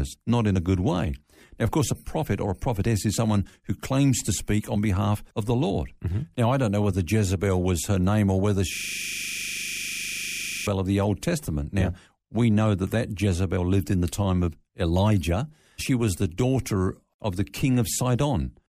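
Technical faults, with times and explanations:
8.75–10.67 s, after "her name or whether": system hang loop. The system froze while the hardware kept replaying one 40 ms buffer, giving a rigid 25 Hz buzz.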